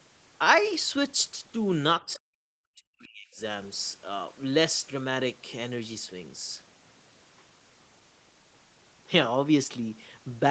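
From 2.05 to 3.4 s the speech dips and breaks up, falling away by up to about 40 dB across roughly a second in total. This is likely speech suppressed in double talk: with both ends talking, the echo canceller mistook the talker for loudspeaker echo and attenuated it.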